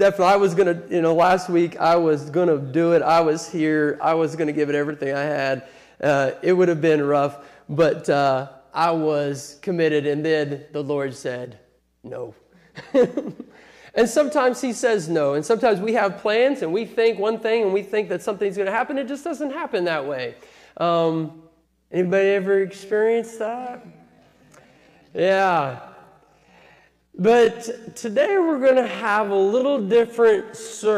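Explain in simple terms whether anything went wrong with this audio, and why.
A time-stretched section runs from 21.97 s to the end. The pace suddenly drops to 61% of normal speed while the pitch stays the same, so the audio drags. Software likely slowed it to fit a set length by repeating tiny slices.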